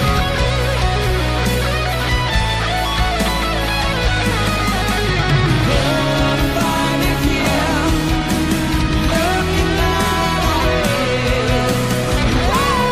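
Nothing in this one stands out as a technical fault; there's just nothing to flag here.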